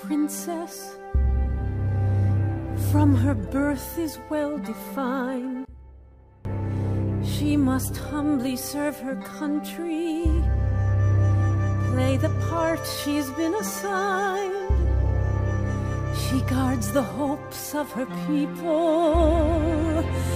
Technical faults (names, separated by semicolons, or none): one channel inverted